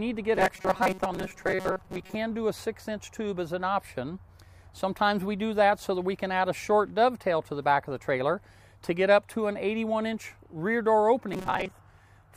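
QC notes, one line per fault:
0.35 to 2.15 s and 11.29 to 11.72 s, robotic sound from repeated short buffers: the audio turns into a rigid, metallic buzz fixed at 188 Hz, which points to a repeated segment of about 5.3 ms. Around half the material seems replaced by these repeats, so the sound follows the original only loosely. The likely cause is audio arriving too slowly. Unlike a mains hum, the buzz replaces content rather than sitting beneath it, and it stops when each stretch ends.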